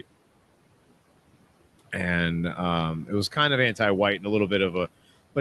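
Noise suppressor artifacts run throughout: the room noise, about 19 dB below the speech, is pulled down by about 18 dB between words, so the noise floor pumps. On a spectrogram, the background band darkens in gaps and brightens under speech.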